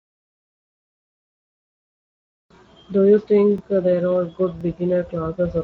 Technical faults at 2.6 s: Speex codec; overlapping chunks

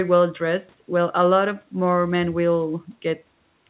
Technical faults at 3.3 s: none

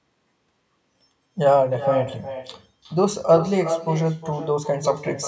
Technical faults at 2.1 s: echo with no canceller

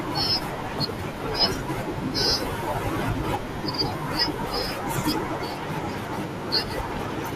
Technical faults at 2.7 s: MP2 compression

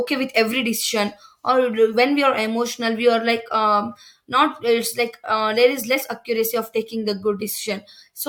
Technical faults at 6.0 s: compressed frames skipped

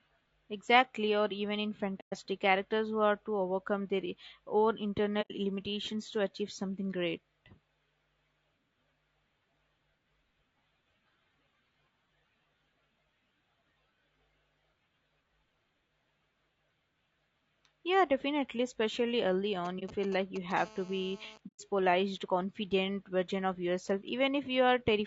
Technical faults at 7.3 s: low-delay AAC compression

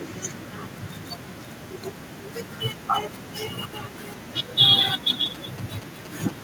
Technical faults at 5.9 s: GSM signalling bursts

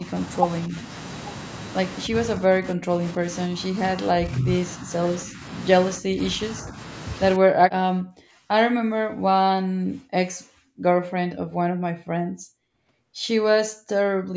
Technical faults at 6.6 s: speech suppressed in double talk

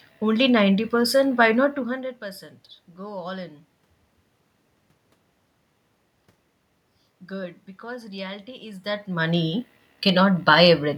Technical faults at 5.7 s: none

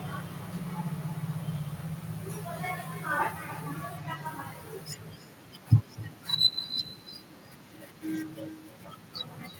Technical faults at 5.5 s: echo with no canceller

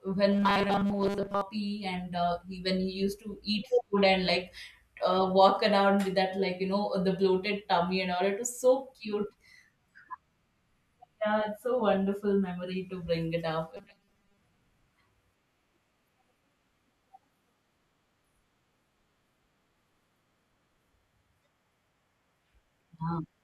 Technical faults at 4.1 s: none

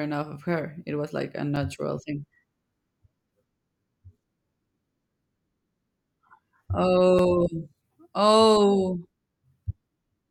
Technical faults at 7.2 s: block of digital silence

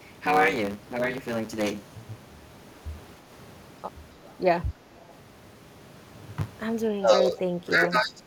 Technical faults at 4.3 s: block size mismatch (truncated); echo leak

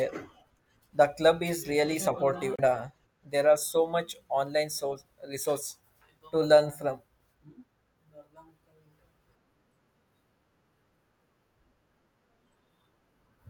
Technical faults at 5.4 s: none

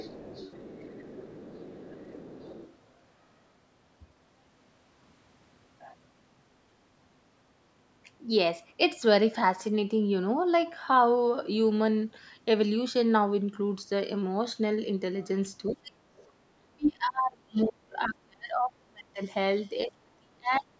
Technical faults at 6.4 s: none

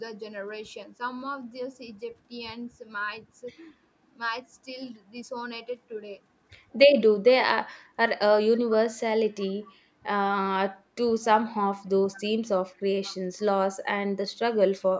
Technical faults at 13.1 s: echo leak

